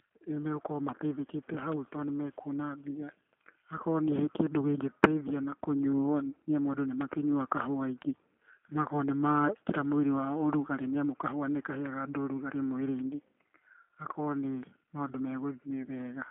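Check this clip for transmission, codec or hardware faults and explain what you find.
Two things stand out: the whole clip has been through a low-rate speech codec, and there are three isolated digital ticks on top of that.

The G.729 codec is on the whole recording. The speech sits in a phone-line band of roughly 200 Hz to 3.4 kHz, with nothing above 3.6 kHz, and the damage is plainly audible. Instead of sending the waveform, this codec rebuilds the speech from a vocal tract model, a pitch predictor and a few pulses per frame, which fits an 8 kbit/s G.729A link. That's why it sounds intelligible but a bit rough and synthetic.

The bit error spikes land at 7.01 s, right after "amu andũ", at 8.02 s, and at 12.99 s, just after "kahũa nĩkaheaga andũ ũrugarĩ". Each is a single flipped bit in a sample or two, so the value jumps by a power of two and snaps straight back. You hear one sharp, broadband tick each time, with no connection to the speech around it.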